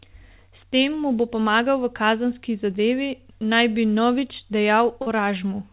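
A speech clip heard through a call path that stops at 4 kHz, which fits G.711 mu-law at 64 kbps. At 5.02 to 5.08 s there is short concealed packet loss. About 40 ms never arrived. The receiver extended the preceding sound, leaving a brief smear.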